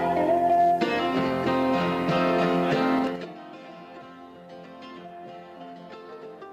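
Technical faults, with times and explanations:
2.99 to 3.33 s, zipper noise. The level drops by roughly 20 dB in jumps of about 5 dB, around ten a second. Nothing smooths each jump. Every abrupt step leaves a small click, so a ticking zip rides on the sound while it falls.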